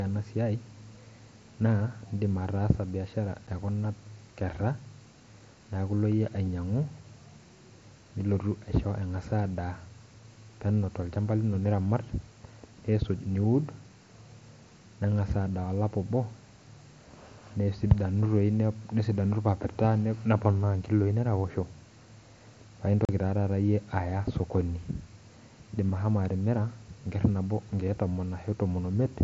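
At 3.47 s, and again from 23.05 to 23.09 s, the headset-to-phone link lost voice packets with no concealment. This is unconcealed Bluetooth headset packet loss. The 7.5 ms and 37.5 ms gaps fit one and five lost mSBC frames. Each gap cuts the speech abruptly, leaving a brief hole.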